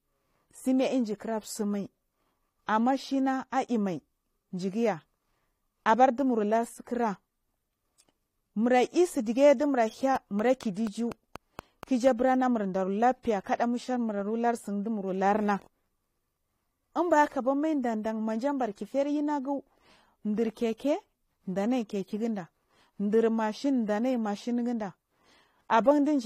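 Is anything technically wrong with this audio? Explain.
Yes. Transcoding between lossy codecs runs throughout: nothing above 16.2 kHz, and two layers of coding artefacts are heard together. This is likely a low-rate HE-AAC encode, near 32 kbit/s, re-encoded as AAC-LC near 48 kbit/s, with the second encoder spending bits on the first encoder's damage.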